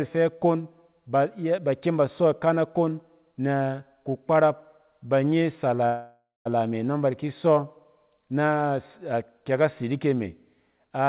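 At 5.86 s the speech stalls in a call audio freeze lasting until about 6.47 s. The likely cause is packets getting held up in transit so the jitter buffer ran dry, and the receiver filled roughly 0.59 s by stretching the last sound into a fading buzz or hiss that ends in about 0.19 s of silence. The speech then picks up right where it stopped, so nothing is lost, but everything after arrives about 0.59 s later. Throughout, the band tops out at 4 kHz, which fits a G.711 A-law call path.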